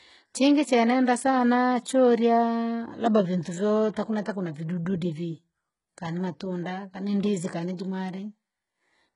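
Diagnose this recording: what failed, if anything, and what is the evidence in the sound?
Throughout, the speech's sibilants sound gritty and lispy above a hard ceiling near 11.1 kHz: codec stage, likely heavy HE-AAC compression with synthetic band-replicated treble at a very low bitrate.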